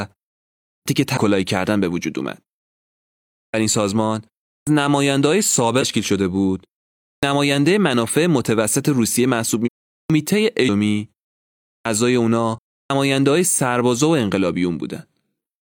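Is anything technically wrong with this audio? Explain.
Yes, two kinds of fault recur through this speech clip.

Clipped start after a pause: at 0.72, 3.38, 4.52, 7.07, 9.95, 11.71 and 12.77 s, speech begins abruptly out of silence with its opening sounds missing. Each time roughly 0.14 to 0.16 s is lost, after pauses lasting 0.31 to 1.02 s. During those silences the output device drops into a sleep or idle state and needs that much time to wake and lock again, so the first part of each phrase is swallowed.

Damaged data in a compressed stream: at 1.13, 5.78, 9.62, 10.65 and 12.52 s there are brief disruptions of about 44 to 62 ms, each a short burst of wrong sound or a hole in the audio. At these points the encoded data itself is corrupted. The decoder misreads or rejects the affected frames, loses sync and has to hunt for the next valid frame header before normal playback resumes.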